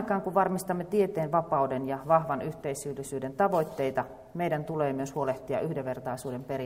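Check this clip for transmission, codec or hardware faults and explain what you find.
Nothing in the signal points to a transmission, codec or hardware fault.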